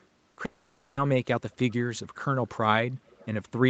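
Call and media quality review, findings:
Echo leak, 0.00–0.04 s and 3.06–3.27 s. Faint delayed copy of the speech trailing by about 270 ms, then about 280 ms. Very low at first, somewhat stronger later. Likely far-end loudspeaker pickup not fully removed by its echo canceller.

Short concealed packet loss, 0.31–0.35 s and 0.35–0.39 s. Back-to-back 20 ms gaps patched by the receiver extending the preceding sound, heard as a brief smear or wobble before blending back into real audio. Jitter buffer / decoder concealment.

Long network dropout, 0.45–0.99 s. About 520 ms of audio never arrived and was replaced by synthetic continuation of the last sound, a fading buzz or hiss with no true silence. Likely network outage, then playback resumes without the lost section.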